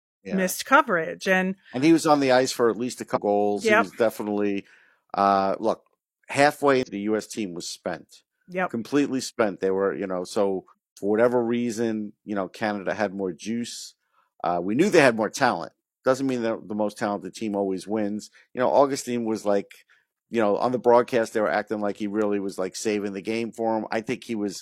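Damaged data in a compressed stream produces three brief glitches: 3.12–3.18 s after "for at least a", 6.83–6.89 s after "definitely uh look halfway", and 10.68–10.72 s between "were you know so" and "for whatever reason you". Each time, the decoder misreads corrupted frames and loses sync until it finds the next frame header.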